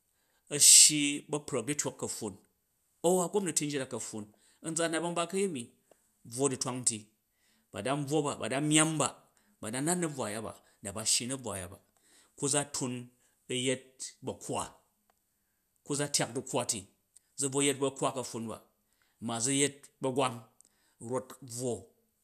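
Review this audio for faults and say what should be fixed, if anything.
Nothing in this speech recording needs fixing. No technical fault can be heard at any point in the audio.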